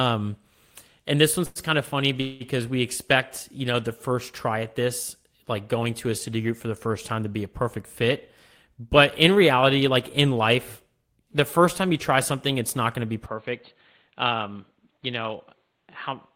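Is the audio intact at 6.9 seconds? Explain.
Yes, the speech at 6.9 seconds plays through intact, with no dropout, glitch or other fault at that moment.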